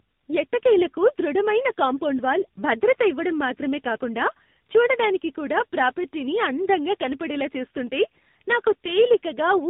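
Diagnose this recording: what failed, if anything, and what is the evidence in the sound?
What failed is at the codec stage: tandem speech coding, audible across the whole clip. The speech is rough, muffled and warbly, with nothing above about 3.8 kHz. That degradation is stacked, more than any single narrowband coder would cause, and it points to roughly three speech codecs in a row, likely a CVSD-style waveform coder feeding into AMR-NB. Each one re-encodes the previous one's artefacts, so the damage compounds at every hop.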